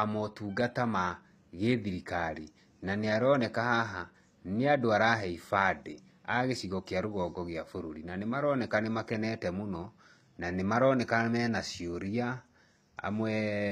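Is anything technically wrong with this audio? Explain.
Yes. Throughout, the speech has gritty, lispy s sounds and nothing above 14.9 kHz, likely from HE-AAC compression rebuilding treble from lower bands, which fits a bitrate near 24 kbps.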